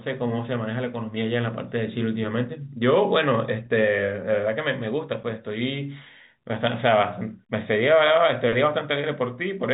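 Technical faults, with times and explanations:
3.66 s, packet loss with pitch repetition: a tiny 10 ms dropout, which fits a single lost packet, gets bridged by replaying the last pitch period, so you catch a brief, slightly held buzz in the voice, sitting inside the band-limited G.711 telephone sound.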